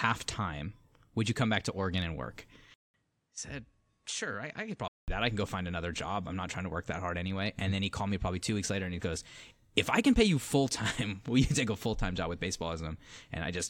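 A speech clip. After "and work", at 2.74 s, the input was likely switched to a poorer device. A 200 ms gap opens. The sound turns dull, with nothing above 11.1 kHz, drops about 10 dB, and gains faint new noise. Normal sound returns at 5.08 s, before "that I can go".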